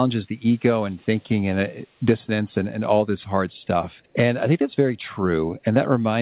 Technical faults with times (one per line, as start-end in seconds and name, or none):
0.57-1.24 echo leak